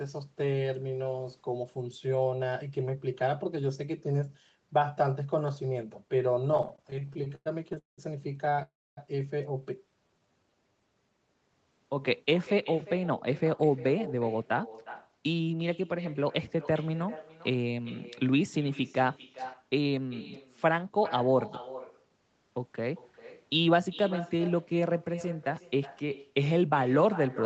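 Throughout the speech, an echo with no canceller returns each phrase about 16 dB quieter, roughly 0.4 s later. Unlike room reverb, it is a distinct, thinner delayed copy.

From 6.51 to 8.00 s, repeated stalls (stutter) break the flow. The jitter buffer keeps running dry, so the receiver repeatedly extends the last sound, up to about 0.19 s at a time. The speech drags and stutters, with nothing missing. A briefer stutter follows at 8.46 to 8.62 s.

At 8.62 to 8.99 s comes a call audio freeze, likely from packets held up in the network. A single continuous wait fades to about 0.26 s of silence, then resumes where it stopped, unlike the choppy stutter.

From 9.90 to 10.81 s, a jitter buffer slow-down repeats pitch periods to rebuild reserve. The speech runs at 86% speed with unchanged pitch, sounding drawn out rather than broken.

Jitter buffer speed-up trims pitch periods to cut delay at 12.47 to 16.31 s (111%), 19.47 to 19.77 s (114%) and 24.67 to 26.15 s (109%). 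The speech sounds hurried at the same pitch.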